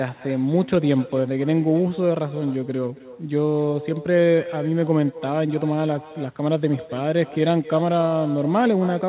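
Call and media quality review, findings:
Echo with no canceller, whole clip: a discrete, thin copy about 17 dB down trails the speech by about a third of a second. Far-end loudspeaker feeds its microphone with nothing removing it. Unlike reverb, this is a separate late repeat, not a smeared tail.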